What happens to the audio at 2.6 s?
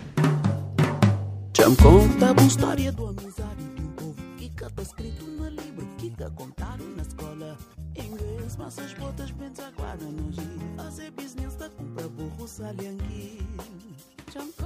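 A fast ticking, like a zipper, rides on the sound from 2.45 to 3.20 s as the level drops by roughly 20 dB. That is zipper noise: the gain moves in unsmoothed 2 dB steps, about twenty per second.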